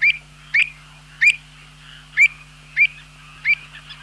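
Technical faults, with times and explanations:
0.59–0.63 s, short concealed packet loss: About 20 ms of audio failed to arrive in time. The receiver improvised roughly 16 ms by extending the preceding sound, then crossfaded back into the real signal. The result is a brief smear or wobble.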